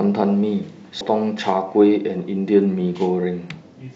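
At about 1.01 s there's a very short burst of damaged data in a compressed stream, lasting only a few milliseconds. Some bytes in the encoded speech got corrupted, so the decoder misread the frame there, lost its place, and had to hunt for the next valid frame header before picking up again. You hear that as a tiny blip cutting into the speech, over almost as soon as it starts.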